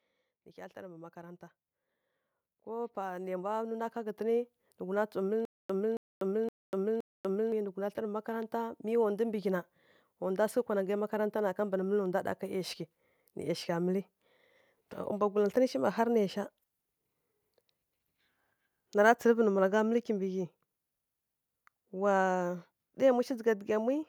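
From 0.31 to 5.1 s, automatic gain rising lifts the speech and the background together by about 14 dB over several seconds. The automatic gain control judged the input too quiet and kept raising its gain. The slow, joint swell sets it apart from a speaker simply getting louder, where the background would stay put.

Between 5.45 and 7.52 s, a stutter with silent gaps repeats one 0.27 s fragment four times, each followed by about 0.24 s of digital silence, on an even 0.52 s cycle. The likely cause is a stalled player or stream replaying its last buffer at each retry and then running empty. The dead-silent gaps and strict timing distinguish it from dropouts or packet-loss concealment, and the audio that should have played meanwhile is lost.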